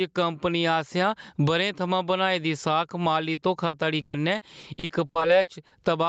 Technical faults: gain pumping; repeated packet loss (robotic sound)

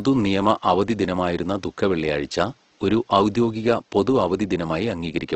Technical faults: Opus compression

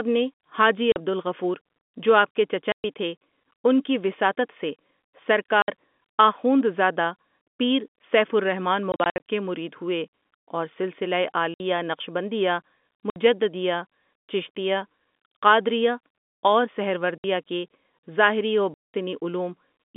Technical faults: packet loss filled with silence

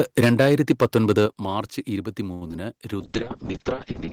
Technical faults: microphone overload; microphone volume stepped down; short stall from a late packet; short concealed packet loss; call bitrate drop

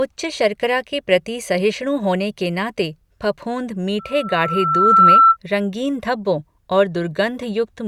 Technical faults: loudspeaker feedback squeal

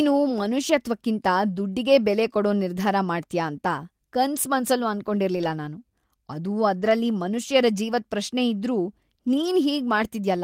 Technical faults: lost packet rebuilt from error correction

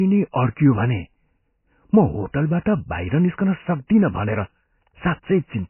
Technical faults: MP3 compression

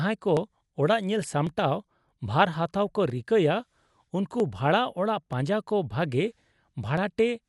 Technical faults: Dolby Digital compression; dropped samples

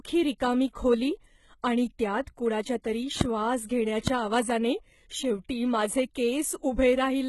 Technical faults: HE-AAC compression; loud pop

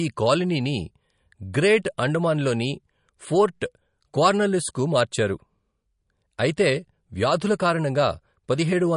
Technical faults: MP3 compression

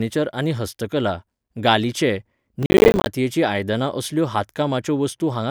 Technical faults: processor overload crackle

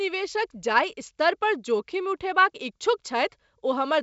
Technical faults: none

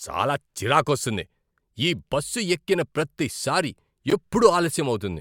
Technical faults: corrupt frame decoded

